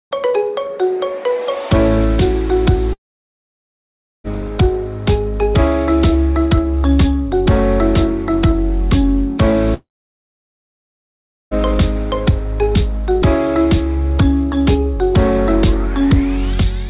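From 2.93 to 4.27 s and again from 9.74 to 11.54 s the sound breaks into a brief fading buzz, then near-silence lasting about 1.3 s and 1.7 s. This is likely a long network dropout: packets stopped arriving, concealment faded out, and that audio never returned. The narrowband call path, with nothing above 4 kHz, frames both gaps.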